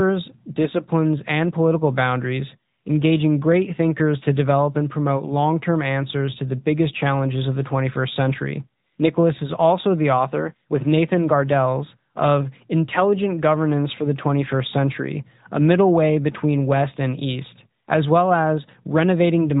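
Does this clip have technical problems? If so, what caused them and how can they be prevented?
Yes. Throughout, the speech sounds muffled and plainly buzzy and synthetic, with nothing above 4 kHz. This is AMR narrowband mobile codec damage: speech is rebuilt from a vocal-tract model and a few pulses per frame, at a rate that points to roughly 10 kbps. Avoid it by recording over a wideband path rather than a phone call.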